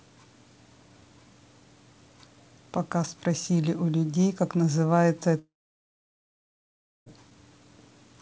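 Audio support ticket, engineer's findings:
Long network dropout, 5.39 to 7.09 s. Audio stops; the last sound trails off as a fading buzz or hiss, then about 1.6 s of near-silence. Resumes without the missing 1.7 s. Likely packet loss over the G.722 call path, content capped at 8 kHz.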